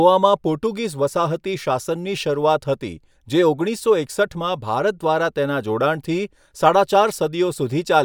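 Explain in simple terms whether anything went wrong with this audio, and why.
Nothing went wrong with this audio, as there are no faults to be heard anywhere in the recording. It is a speech clip, and no problem turns up at any point.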